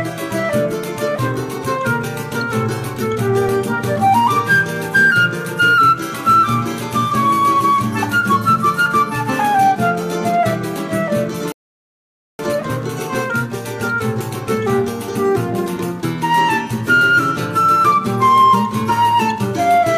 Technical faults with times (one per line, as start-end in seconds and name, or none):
11.52-12.39 rebuffering stall